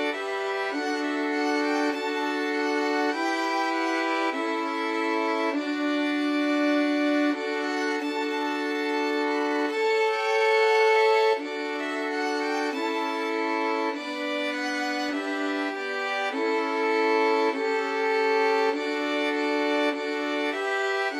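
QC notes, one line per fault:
7.71–11.91 s, time-stretched section: right at 7.71 s the pace suddenly drags to about 0.71 times normal speed, while the pitch holds steady, and it snaps back to normal at 11.91 s. The slowed stretch drags, because the software is likely padding out the length by repeating short slices of the audio rather than slowing it like tape, so the length grows without dropping the pitch.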